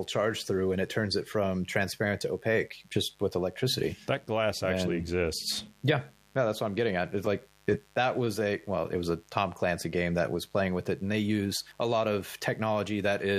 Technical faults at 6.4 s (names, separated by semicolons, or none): mains buzz